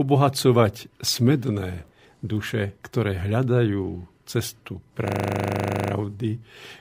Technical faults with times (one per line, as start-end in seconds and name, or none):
5.08-5.92 system hang loop